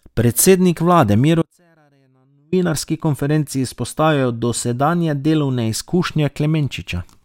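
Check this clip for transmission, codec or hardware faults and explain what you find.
One fault in this speech clip: from 1.42 to 2.52 s, an audio dropout to a faint residue. For about 1.1 s the signal abruptly collapses to a faint leak roughly 40 dB down, likely a brief break in the signal path. On the waveform the envelope drops to a thin sliver with sharp edges, and the spectrogram shows a near-empty band.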